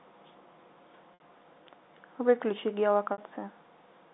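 At 1.14 s and 3.12 s, packet loss with pitch repetition fills 60 ms gaps. A repeated pitch period fades out, heard as a brief buzzy hold.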